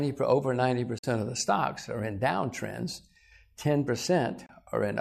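Short holes of silence, with quick fades, at 0.98 to 1.04 s and 4.46 to 4.50 s: a digital broadcast dropout, the receiver muting while frames were lost.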